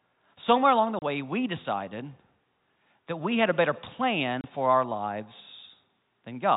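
Packet loss filled with silence hits at 0.99 s, right after "along the", and again at 4.41 s, just before "for our". Each time the sound stops dead for 30 ms, a gap that fits a single lost packet, and the receiver played nothing in its place. The speech, heard through a G.711 telephone channel with nothing above 4 kHz, drops out abruptly at the hard edges of each hole.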